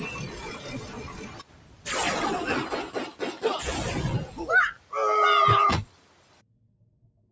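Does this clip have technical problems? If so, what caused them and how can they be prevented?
Yes. A speech noise suppressor was applied to music or sounds throughout. It treats sustained parts as noise, so the level pumps, swinging by around 20 dB.

Sound was also cut by the noise suppressor from 0.57 to 1.86 s, 4.75 to 4.92 s, and 5.86 s to the end. Levels drop by about 8 to 9 dB, and fading tails sink.

To prevent this, disable noise suppression or switch the call to a music or original-sound mode.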